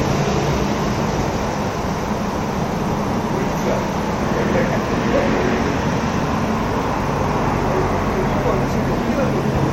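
A steady, even hiss sits under the sound from start to finish, about 30 dB below it, with no distortion: low bit depth with dither, pointing to roughly 8-bit samples. At 9.50 s, a brief, fairly quiet burst of misplaced energy is a corrupt frame decoded, where damaged data in a couple of compressed frames was played anyway.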